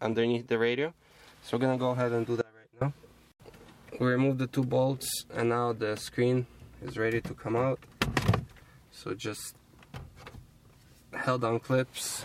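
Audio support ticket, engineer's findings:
Audio dropout to a faint residue, 2.41–2.81 s, about 400 ms. Signal cuts out abruptly and returns just as abruptly, not a pause or fade. Gap holds a faint leak of the sound roughly 25 dB below normal. Path stayed live through the break. Likely cause: upstream source or link briefly losing the feed while downstream gain stage kept passing residual bleed.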